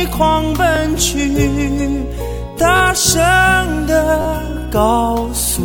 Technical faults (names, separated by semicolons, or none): repeated buffer